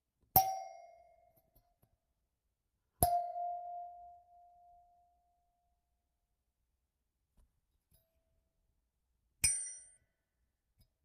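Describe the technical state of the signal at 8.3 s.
At 8.3 s the sender's audio clock is running roughly 3 percent slower than the receiver's. This clock drift between sender and receiver persists for the whole recording of everyday sound, not just at this moment. Because fresh audio arrives a little more slowly than the receiver plays it out, its jitter buffer keeps draining. To avoid running dry, the receiver has to pad out what it has.

The 8.3 s point falls inside a run of repeated timing corrections that spans about 0.04 to 11.03 s. All of these corrections go the same way: the receiver repeats short pieces, so playback runs at about 97 percent speed. Across the span this adds roughly 0.3 s. The edits are small and unevenly spaced, so at 8.3 s any trace is a small hiccup or a slightly unsteady pace rather than a clear break.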